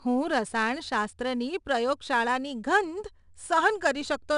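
From start to finish the speech carries 4-bit ADPCM compression. Each sample is coded as a coarse step from a prediction, so a gritty hiss rides every loud syllable. Nothing sits above 10.6 kHz, and the damage fits a stream of roughly 89 kbps.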